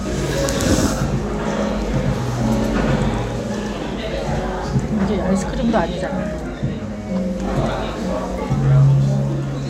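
Sounds, doubled from the start to 3.78 s by an equally loud, dry copy trailing around a tenth of a second behind: a doubled audio track, likely from a second, slower capture path.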